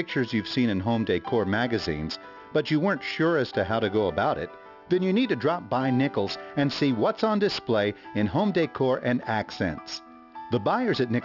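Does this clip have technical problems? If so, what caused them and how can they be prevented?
Yes, aliasing throughout: a rate reduction without anti-alias filtering, apparently to 12 kHz, folded energy above 6 kHz back down, leaving gritty, metallic false tones about 20 dB below the signal. Prevent it by low-pass filtering below 6 kHz before resampling.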